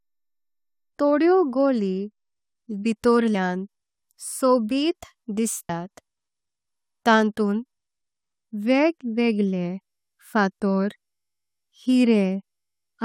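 At 3.34 s and again at 5.68 s the speech gets hit by damaged data in a compressed stream, each one a very short blip. What's going on is that part of the encoded stream is bad, so the decoder can't make sense of the frame it's on, loses its place, and has to hunt for the next valid frame header before it can carry on.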